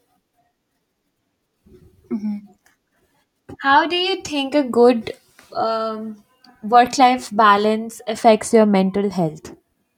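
Nothing goes wrong anywhere in this speech recording; there's simply no technical fault to point to.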